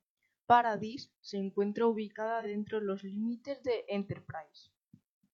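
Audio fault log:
2.40–2.46 s, AAC frame loss with concealment: a smeared, noisy 43 ms patch, consistent with a single frame rebuilt from the last good spectrum.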